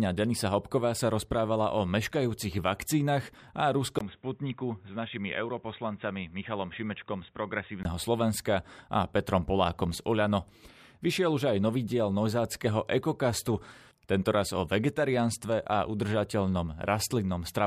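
From 3.99 to 7.85 s, just after "o meškajúcich vakcínach a", the speech drops out for about 20 ms, then returns dull, boxy and a few decibels quieter. Nothing reaches above 3.8 kHz, and a faint new noise floor sits beneath it. The input likely switched to a poorer device with a narrower band.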